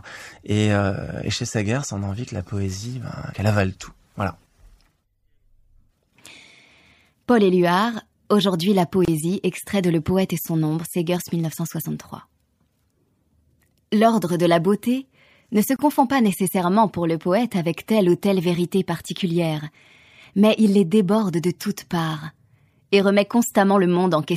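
Separately encoded pieces were joined without trimming encoder delay and end padding, leaving gaps at a join of encoded pieces: about 27 ms of silence at 9.05–9.08 s before "extrait de", and about 29 ms at 15.76–15.79 s between "la beauté ne se" and "pas nécessairement pour le". The speech drops out with smeared edges, then resumes where it stopped.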